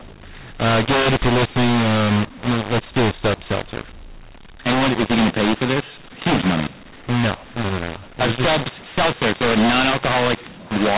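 From start to end the speech carries a mu-law and A-law mix-up: samples coded with the G.711 mu-law curve are being expanded with the A-law table. Because the two logarithmic scales don't match, every level is mapped wrongly. Some come out too loud, others too quiet, and near-silent samples are pushed well above zero. The result is harsh, gritty distortion on the speech and a noisy hiss filling the pauses. The telephone band limit near 4 kHz from the 8,000-per-second coding is still audible.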